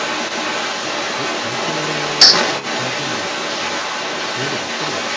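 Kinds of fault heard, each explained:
echo leak: A delayed copy of the speech trails the original by 293 ms throughout, roughly 5 dB louder than the speech. The likely cause is a loudspeaker on the other end whose echo canceller let its microphone's pickup return into the call.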